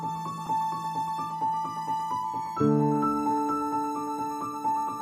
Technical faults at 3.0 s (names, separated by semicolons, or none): none